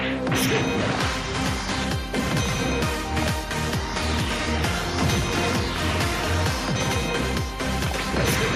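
No technical faults are audible.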